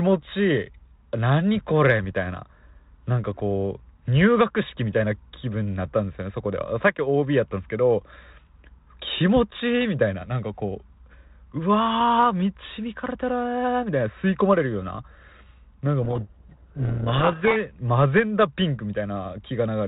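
From 16.02 to 17.57 s the speech, otherwise carried as 32 kbit/s G.726 with light coding roughness and nothing above 4 kHz, is buried in harsh distortion. This is a codec payload misread: the receiver unpacks each G.726 code word in the wrong bit order, so the adaptive predictor is fed wrong differences. On a spectrogram the speech harmonics dissolve into dense smear below 4 kHz, and the waveform turns jagged and noise-like until decoding realigns.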